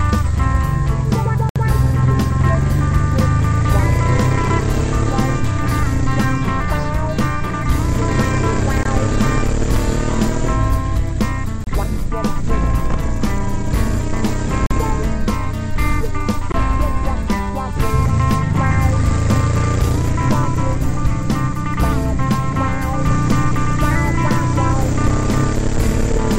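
At 1.49 to 1.56 s, 8.83 to 8.85 s, 11.64 to 11.67 s, 14.66 to 14.71 s and 16.52 to 16.54 s, the audio drops into a block of digital silence. The gaps run 64, 21, 30, 43 and 21 ms. Output was likely not delivered in time. Each gap cuts in and out abruptly and sounds like a short hole.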